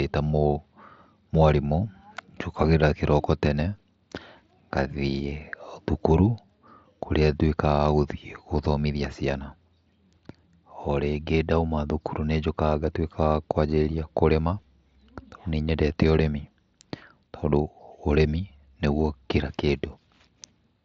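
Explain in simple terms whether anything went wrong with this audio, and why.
Nothing went wrong with this speech recording.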